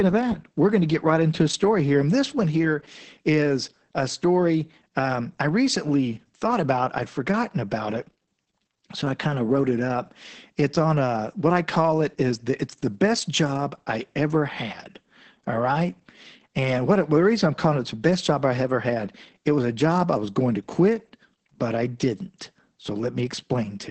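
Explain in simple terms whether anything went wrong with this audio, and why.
The whole recording has Opus voice compression damage, from the first second to the last. The speech sounds muffled, a little hoarse and faintly robotic, and nothing above about 8.5 kHz survives. Unlike a simple treble cut, which only dulls the sound, this compression also handles the voice's buzzy raw texture crudely. That roughness, together with the missing top, shows the voice was squeezed hard by a speech-focused codec.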